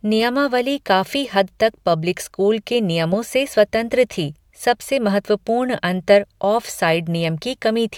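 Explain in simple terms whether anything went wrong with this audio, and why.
Nothing went wrong here: the speech comes through without any audible fault at any point.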